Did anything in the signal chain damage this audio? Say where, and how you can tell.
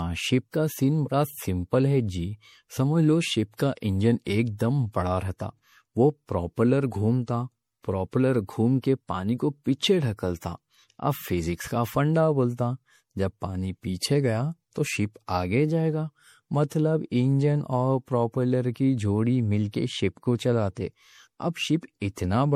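Yes. Generation loss runs through the whole speech clip, from start to finish, at the codec stage. The sound is swirly and hollow, with smeared consonant attacks and coding noise that builds on itself, and nothing reaches above 19.7 kHz. That is more damage than a single lossy pass would leave. The likely cause is repeated MP3 decoding and re-encoding, a few passes at a rate consistent with 64 kbit/s. Each pass requantised the audio on a shifted frame grid, so the errors stacked up.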